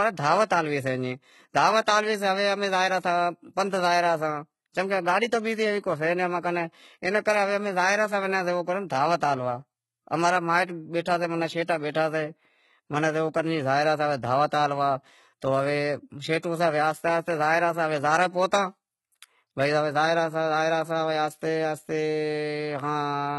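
From start to finish the speech carries heavy damage of the kind HE-AAC compression leaves, likely from that codec at a very low rate, around 16 kbps. The upper range is bright yet false, with nothing above 11.8 kHz, and s sounds come out gritty and metallic. The treble is rebuilt by copying lower bands upward, so its harmonics fail to line up with those below. A plain low-pass would instead sound dull, with no synthetic sheen.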